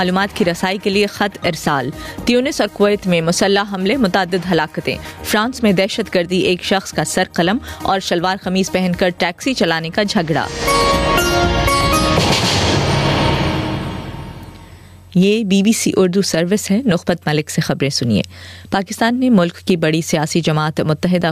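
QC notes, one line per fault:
Throughout: gain pumping. The gain keeps pulling down on every loud sound, swinging something like 15 dB. Loud and quiet parts get pulled close together and the whole thing comes across squashed. The likely cause is input gain set way too hot for the mic, with a fast limiter or compressor clamping down on each peak and releasing between them.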